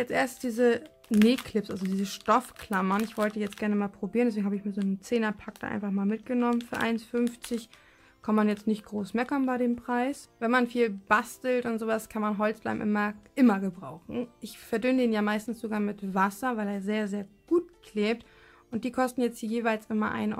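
No technical faults are audible.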